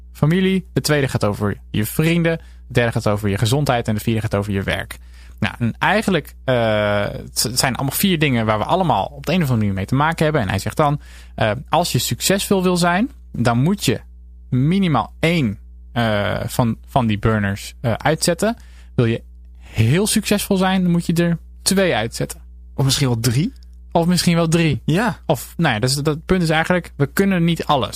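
Mains hum at 60 Hz runs under the whole recording, about 20 dB below the speech, from power-line coupling such as a ground loop. A corrupt frame decoded at 13.77 to 13.79 s, after "succesvol wil zijn dan", gives a short error from one damaged frame. A louder error spanning a couple of frames follows at 24.72 to 24.75 s, after "misschien wel".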